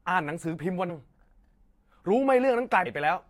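At 0.88 s and again at 2.85 s, compressed frames are skipped: the speech lurches forward, losing about 0.4 s and then 0.5 s, which points to about twenty and then thirty missing frames. Unlike a dropout, there is no silent gap.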